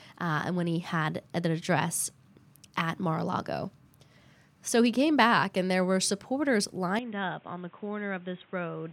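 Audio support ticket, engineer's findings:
Input switched to a poorer device, 6.99 s to end. Speech abruptly duller and boxier, nothing above 3.8 kHz, level down roughly 10 dB, new noise floor well below the speech. No gap at the change. Likely another microphone or a headset call profile.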